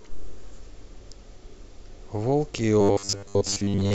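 From 2.81 s to the end, the speech turns into a rigid, metallic buzz at 100 Hz, robotic sound from repeated short buffers, likely from a 10 ms slice being replayed while most of the real audio is skipped. The waveform shows identical repeating cycles; the spectrogram shows evenly spaced harmonic lines.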